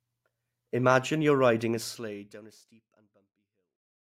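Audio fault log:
No faults found; the speech level eases smoothly down from around 1.5 s to the end as an edited fade-out, with no click or hard edge.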